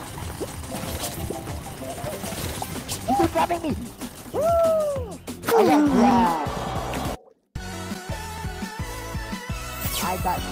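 No technical faults can be heard anywhere in the recording. Nothing breaks into the sound at any point.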